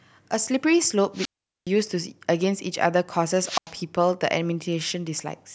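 Two wireless microphone squelch dropouts break up the speech. From 1.14 to 1.69 s, the radio link fades, hiss briefly swells, and then the receiver's squelch shuts the output for about 420 ms before the voice returns. A shorter one follows from 3.41 to 3.72 s, with a mute of about 90 ms. On a waveform each appears as a flat, near-zero gap. A spectrogram shows a broadband haze just before a blank vertical band.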